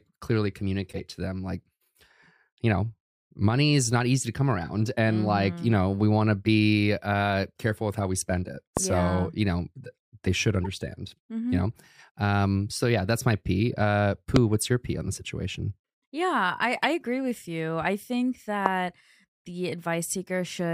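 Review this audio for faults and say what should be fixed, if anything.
There are three corrupt frames decoded in this speech: 0.91–0.99 s (roughly three frames), 10.64–10.66 s right after "they should" (a couple of frames), and 16.84 s (a single frame). Flipped bits made the decoder put energy at the wrong frequencies, so you get short chirpy blips, peaking around -25 dBFS and nearer -15 dBFS at 16.84 s. Adding error detection with concealment of bad frames would mute or patch them instead.

You'll also hear three loud pops at 8.77–8.79 s, at 14.36–14.38 s between "that's my p uh" and "what's your p on", and at 18.66–18.68 s after "with you i think". Each is a single sharp hit about 20 dB above the speech, likely from a voltage spike like a plug, switch or static discharge. Securing cables and grounding the gear should stop them.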